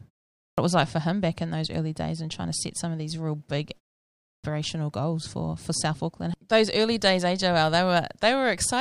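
Speech bursts in abruptly twice, its opening sounds missing: at 0.39 s, after a 0.37 s pause, about 189 ms is lost before "it was like for", and at 4.24 s, after a 0.52 s pause, about 197 ms vanishes before "goals for for". This is a clipped start after a pause: the output device sleeps during silence and needs roughly a fifth of a second to wake, swallowing the onset. The pauses themselves drop to clean silence.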